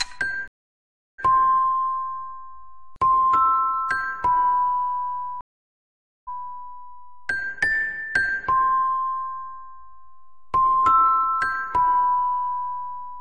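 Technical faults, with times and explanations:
0.48 to 1.20 s, stream reconnect: the connection drops, leaving about 0.71 s of silence, then a fresh decoder picks up mid-stream with a short fade-in. Playback resumes roughly 0.7 s further along, so that stretch is simply skipped, as on a live feed.
5.41 to 6.41 s, stream reconnect: the same break again, this time about 0.86 s of silence. It comes back 0.14 s earlier than where it cut off, so a short bit repeats, which fits the server resending a burst.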